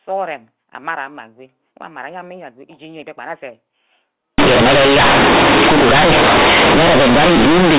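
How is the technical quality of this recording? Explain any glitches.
The recording has one serious glitch, covering its last 3.4 seconds. The first part is telephone-band speech with nothing above 4 kHz, which points to mu-law G.711 coding at an 8 kHz rate.

From 4.38 s to 7.78 s, companded audio is read as linear: the mu-law bytes are played as raw 8-bit samples with no expansion. Each sign change swings across about half the output range, so quiet and loud parts come out equally large. The speech turns into loud, buzzy distortion with heavy noise in the pauses.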